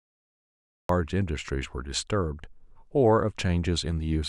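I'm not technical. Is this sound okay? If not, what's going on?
No. There is a cut-off start: the clip is dead silent until about 0.89 s, then the speech begins abruptly in the middle of a sound. The recording started late, so the natural beginning of that sound was never captured.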